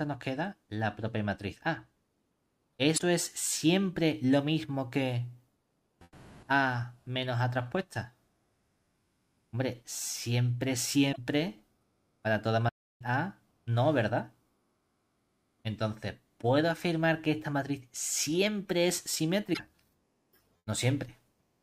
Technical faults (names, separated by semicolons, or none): damaged data in a compressed stream; playback stall